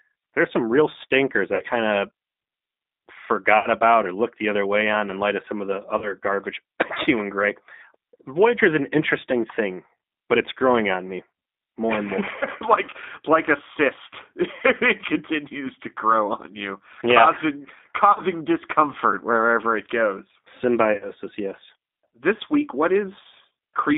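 Throughout, the speech carries G.729 codec damage at 8 kbit/s. The band runs only from 200 Hz to 3.7 kHz. Each frame is rebuilt from a filter, pitch and a few pulses, so the sound is rough and synthetic.

VoIP packet loss concealed by the speech codec hits six times: 1.55 s, after "there's some real stinkers"; 3.58 s, before "about or looked the"; 5.98 s, after "of some of the"; 12.39 s; 18.12 s; and 20.93 s. The decoder extends its last frame over 30 to 70 ms gaps, which gives buzzy, fading smears. The last two gaps are broken up over about 80 ms.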